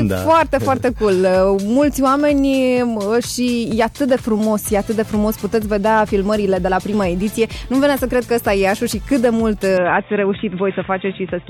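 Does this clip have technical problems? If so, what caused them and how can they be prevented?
Yes. An input switched to a poorer device is heard from 9.78 s to the end of the clip. The sound abruptly turns dull and boxy, with nothing above about 3.8 kHz. The level stays much the same, there is no gap at the change, and the new background noise sits far below the signal. That sudden narrowing likely comes from the system jumping mid-recording to another microphone or a headset's call profile. To prevent it, lock the recording input to one chosen device and disable automatic device switching before recording.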